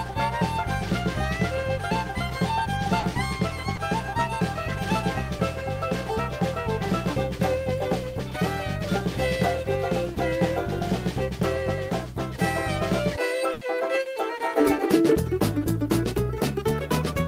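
A call recording with packet loss in two forms. The first is short concealed packet loss at 2.99 to 3.05 s, where about 40 ms was rebuilt, and again at 3.75 to 3.79 s, about 20 ms. The receiver patched each hole by extending the preceding sound, which heard as a brief smear or wobble. On a spectrogram each patch shows as a thin strip of copied, slightly blurred harmonics or noise, and the waveform shows a short run of repeated cycles. The second is a burst of packet loss at 13.53 to 13.63 s, where about 80 ms never arrived in time. The decoder held and faded the last sound across the gap, so it comes through as a brief buzz or hiss, and playback then skips ahead with that stretch missing. On a spectrogram it appears as a smeared, darkening band, and the waveform shows a decaying envelope before normal audio resumes.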